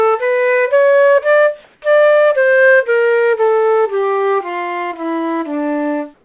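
Everyday sounds in which the background twice turns into a flat, featureless hiss, from 1.64 to 1.82 s and from 6.14 s to the end. This is comfort noise in place of the background, likely from discontinuous transmission filling pauses with synthetic noise at nearly matched level, through a call path with nothing above 4 kHz.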